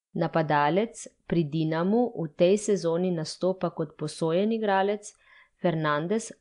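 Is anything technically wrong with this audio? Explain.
Yes. Throughout the speech there is a rough, hissy halo and an underwater smear, with nothing above 10.6 kHz. This is likely Nellymoser compression, which fits a rate near 44 kbps. Its fixed two bits per sample leave weak bands empty and fill them with noise. That steady grainy hiss distinguishes it from the chirping swirls of low-bitrate MP3.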